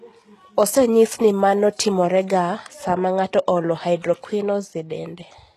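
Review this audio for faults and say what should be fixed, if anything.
Throughout the speech, s sounds are gritty and lispy, with a plainly audible coded quality, likely from HE-AAC compression at a very low bitrate, fitting roughly 16 kbps. The treble is rebuilt from copies of lower bands, so its harmonics don't line up with those below. A spectrogram shows repeated, blocky upper-band patterns and nothing above 12.3 kHz. Encoding at a higher bitrate, or with a full-band codec, would prevent this.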